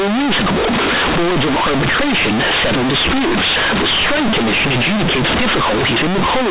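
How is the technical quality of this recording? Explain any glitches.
Poor: the speech is badly distorted from start to finish by one fault, companded audio read as linear. It is heard alongside the narrow telephone band of mu-law G.711 coding, with nothing above 4 kHz.

Throughout the clip, mu-law bytes are being played as plain linear 8-bit samples without being expanded. Every sign change jumps the output across roughly half its range, so quiet passages come out as loud as loud ones, giving harsh, buzzy distortion and heavy noise in the pauses. Ordinary clipping only flattens the peaks and leaves silences quiet. Here, even the gaps roar.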